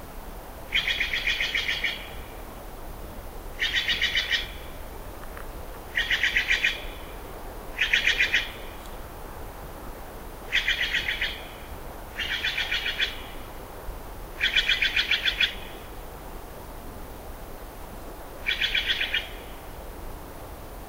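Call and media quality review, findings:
No call or media quality findings to report for this recording of sounds.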